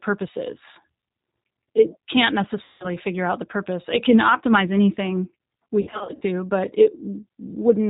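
Throughout, the speech passes through the G.729 codec at 8 kbit/s, rebuilding each 10 ms frame from a vocal tract filter, a pitch predictor and a few pulses. Everything above 4 kHz is cut, leaving a plainly audible rough, synthetic, muffled quality.

From 2.64 to 2.92 s, VoIP packet loss concealed by the speech codec removes 160 ms of audio. The decoder extends its last pitch and filter at falling gain, so the sound smears into a fading buzz or coloured noise and stays weak briefly afterward.

From 5.81 to 6.23 s, the same concealment covers 240 ms of losses scattered across 400 ms, none longer than 60 ms. Repeated guessed frames make the speech flutter between buzzy or noisy, thinned stretches and weak recovery.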